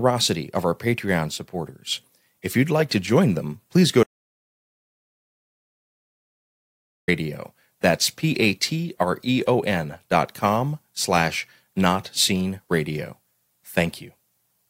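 At 4.03 s, right after "join them please go", the speech drops out to silence until 7.08 s, about 3.05 s lost, likely from a lost input link. The waveform flattens out and the spectrogram shows a blank band, with no room tone.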